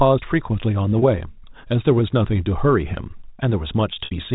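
From 3.93 to 4.11 s the speech breaks up with packet loss and pitch repetition: about 120 ms of audio is missing, scattered over roughly 210 ms in gaps of up to 60 ms. The receiver fills each gap by repeating the last pitch period and fading it out over about 50 ms, so the shorter gaps sound like a briefly held, buzzy tone. The 60 ms gap outlasts the fade and dips toward silence before the speech cross-fades back in, all within the 4 kHz band of the G.711 telephone coding.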